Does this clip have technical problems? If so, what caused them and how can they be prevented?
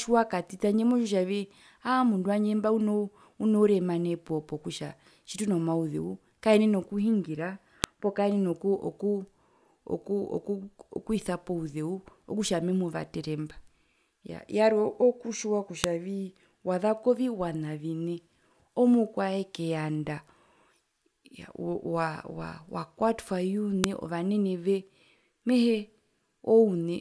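Yes. A file header played as audio gives sharp clicks at 7.84 s (after "tjitunomauzeu kaenen e okuhingira"), 15.84 s (after "yaa yarwe okutjiwa") and 23.84 s. The 8-second spacing shows joined WAV pieces whose header bytes were decoded as samples. Strip headers before concatenating or streaming pieces.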